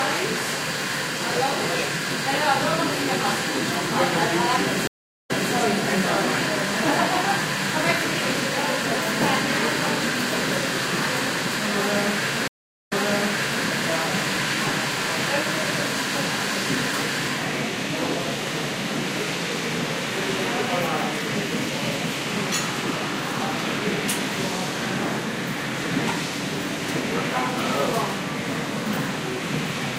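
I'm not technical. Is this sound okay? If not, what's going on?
No. There are two stream reconnects, at 4.87 to 5.53 s and 12.48 to 13.64 s. The connection dropped, the sound cut out for about 0.37 s and 0.38 s, then the player reconnected and resumed slightly behind, repeating roughly the last 0.29 s and 0.78 s.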